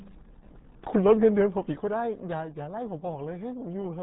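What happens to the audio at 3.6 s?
At 3.6 s the RealAudio 14.4 codec damage is present, as it is across the whole clip. This dial-up-era speech codec squeezes the signal into a tiny bit budget, consistent with roughly 8 kbit/s, discarding everything above about 3.8 kHz and coarsely modelling what remains. The speech therefore sounds muffled and heavily gargled, with a watery, bubbling texture on the voice and no high-frequency detail.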